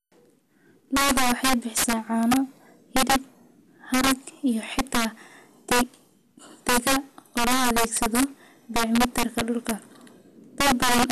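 Right through the speech you get integer overflow. The signal's pushed about 10 dB too hot, and instead of limiting, the loudest few percent of samples wrap to the opposite sign. So every loud peak turns into a violent crack, far harsher than ordinary clipping.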